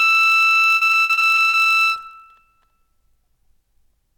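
A block size mismatch (padded) runs through the whole piece of music: one stage hands over blocks shorter than the next stage reads, and the shortfall is filled with silence. This fits a 1024-sample read block, and it produces a steady buzz at about 46.9 Hz, while playback slows only to 0.999 times normal speed at essentially unchanged pitch.

From 0.75 s to 1.68 s, repeated packet loss (robotic sound) breaks up the music. Eleven gaps arrive in quick succession, the longest 60 ms, and each is patched by extending the preceding sound. About 37% of that stretch is concealed this way, leaving it choppy with pieces missing.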